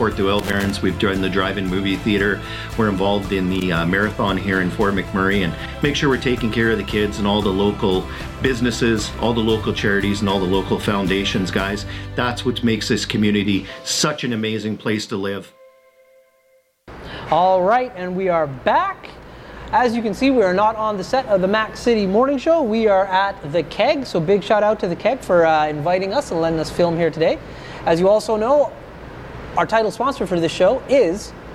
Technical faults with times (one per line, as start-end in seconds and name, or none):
0.39-0.70 loose connector crackle
3.55-3.63 loose connector crackle